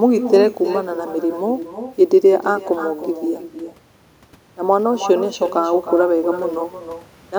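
Throughout this speech clip, the talker's voice is trailed about a third of a second later by a quieter, thinner copy about 11 dB down: echo with no canceller, returning from a far-end loudspeaker.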